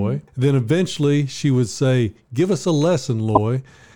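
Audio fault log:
1.61–1.66 s and 3.35–3.38 s: corrupt frame decoded. Damaged compressed frames were decoded anyway, so misread gains and codes scatter energy to wrong frequencies. The first is a faint error about 50 ms long. The second is a brief, near full-scale error lasting a few frames.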